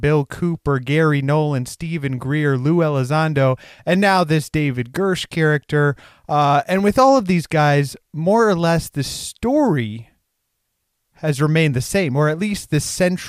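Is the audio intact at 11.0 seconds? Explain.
Yes, the audio at 11.0 seconds is intact, with no audible fault at that moment.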